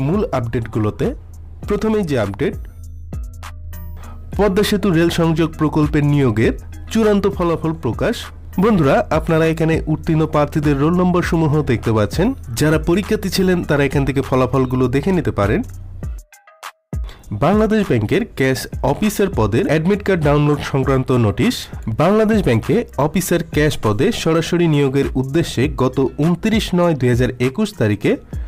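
No technical faults are audible.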